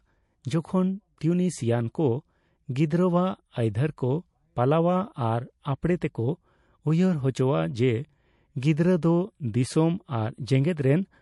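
Speech runs through the whole clip with a watery, swirling quality. Sibilants carry metallic chirps. The likely cause is heavy MP3 compression, and the damage fits a low bitrate of around 48 kbps. On a spectrogram, high-frequency energy breaks into scattered patches that flicker on and off from frame to frame instead of forming smooth bands. There are two pre-echoes. The first is a hiss from 1.19 to 1.21 s, spread over 22 ms and about 18 dB above the surrounding floor. The second runs from 8.60 to 8.63 s, spread over 26 ms and about 15 dB up. In each, quantisation noise meant for a sharp attack leaks into the quiet just before it, so the onset sounds smeared. The spreads fit a transform window of about 48 ms that never switched to short blocks. On the waveform, a thin fuzz of noise leads each attack. On the spectrogram, a broadband smear sits just before each onset.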